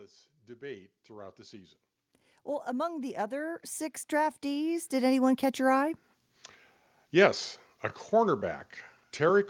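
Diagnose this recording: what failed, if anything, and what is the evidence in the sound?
Automatic gain rising in call processing: the gain control judged the input too quiet and raised it, lifting speech and background together by about 4 dB over 0.58–1.81 s and about 11 dB over 2.65–5.51 s, just before "your eye".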